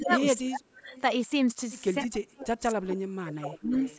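From 0.00 to 0.11 s the speech dips by about 15 dB. This is speech suppressed in double talk. Both ends were likely talking at once, and the echo canceller could not tell the local talker from the loudspeaker return, so it pulled everything down. From 0.02 to 0.23 s an echo leak follows. A copy of the speech comes back about 276 ms late, roughly 10 dB below it. The far end's canceller likely let part of its loudspeaker pickup through.

From 0.37 to 0.92 s the suppression returns harder. The speech sinks by about 25 dB for around half a second. At 0.92 to 1.02 s a faint echo slips through, about 278 ms late and about 25 dB down.

The longest dip runs from 2.11 to 3.74 s. The speech falls by as much as about 35 dB for well over a second. From 3.65 s to the end, the echo leaks back at about 285 ms delay, about 20 dB under the speech. The call's microphone processing is working normally, with nothing above 8 kHz.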